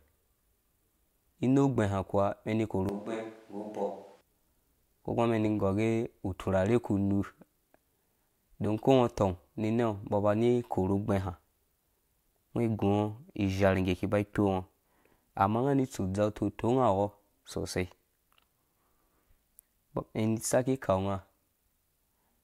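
From 2.89 to 4.21 s the speech suddenly turns roomy and hollow, loses bass, drops about 10 dB and gains background noise around 30 dB below it, then snaps back. This is a switch to a distant microphone, likely because the close microphone's signal dropped out.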